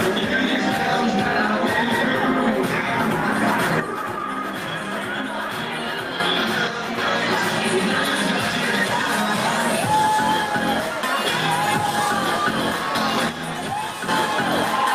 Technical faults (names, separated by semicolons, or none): one channel drops out